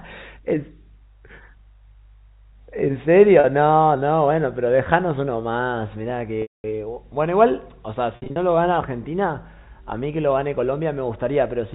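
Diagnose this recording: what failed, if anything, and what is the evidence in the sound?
Network packet loss with pitch repetition. A buzzy 40 ms hold at 3.4 s. Fade to silence across 6.42–6.64 s. Scattered gaps across 8.16–8.36 s. The receiver repeats the last pitch period.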